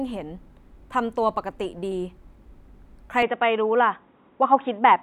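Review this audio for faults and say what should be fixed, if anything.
The input most likely switched to a poorer device at 3.22 s, something like a headset's call profile, and stays there to the end. From that point the speech loses everything above 3.8 kHz and turns dull and boxy. The level shifts by about 5 dB, and a faint new background noise appears well below the speech. The switch is immediate, with no gap. To prevent it, lock the recording to a fixed input device and disable automatic device switching for the session.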